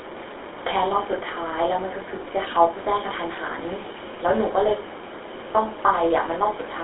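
Throughout, the speech has plainly audible GSM full-rate codec damage. Its pulse-driven excitation sounds buzzy and gravelly. Nothing passes above 3.8 kHz.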